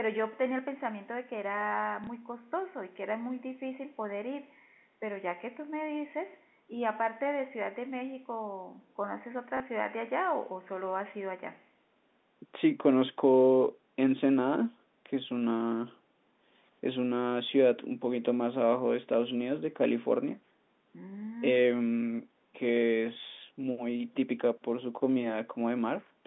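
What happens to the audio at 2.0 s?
At 2.04 to 2.07 s there is a brief packet loss with the last packet repeated. About 30 ms of audio went missing, which fits a single lost 30 ms packet, and the receiver filled the gap by replaying the previous chunk. It sounds like a small blip. A waveform shows a copied segment there.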